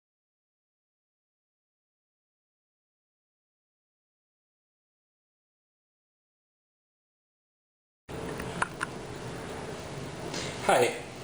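A steady 50 Hz buzz rides on the audio for its whole length. It is present only while there is signal. This points to a resampler restarted on every block. Each block was converted separately, likely upsampling from 24 kHz to 48 kHz. So the converter lacked the neighbouring samples at each edge and left a small error there. A 50 Hz rate fits blocks of 20 ms. At that spacing the ticks blur into a buzz.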